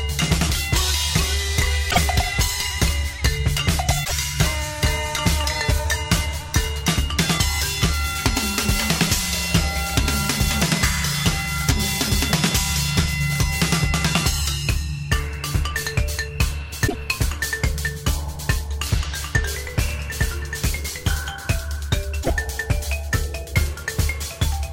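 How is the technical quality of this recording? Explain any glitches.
The recording has four short glitches, at 1.90–1.98 s, 4.04–4.12 s, 16.86–16.95 s and 22.22–22.30 s. Each lasts about 80 ms and is heard as a brief chirp, burst of garbled noise or short hole, after which the sound resumes further along. The likely cause is a broken MP3 bit reservoir. When frames are cut from a stream, the following frames borrow bits from data that is gone, so roughly three 26.1 ms frames decode as garbage. A plain dropout would leave silence and pick up where it stopped, but here the sound skips ahead.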